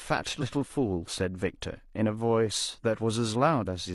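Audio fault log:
0.38–0.43 s, damaged data in a compressed stream: a short burst, about 50 ms long, of corrupted bytes in the encoded speech made the decoder misread the frames there and lose sync until it found the next valid frame header, so a brief blip cuts through the speech. On a spectrogram it appears as a narrow vertical smear of garbled energy that doesn't follow the surrounding speech harmonics; in the waveform, an abrupt segment with mismatched edges.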